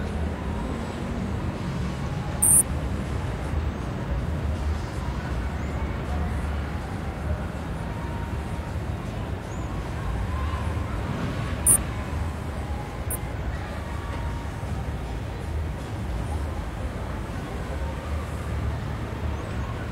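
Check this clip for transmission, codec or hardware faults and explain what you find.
Five stretches have frames out of order, at 2.08–2.61 s, 8.30–8.69 s, 11.50–11.90 s, 12.95–13.34 s and 19.40–19.77 s. In each, two adjacent runs, each about 186 ms and consistent with runs of four frames, were swapped before decoding, so the sound plays as a garbled flutter with no time lost. On a spectrogram or waveform, content jumps abruptly at each join, with sections visibly transposed.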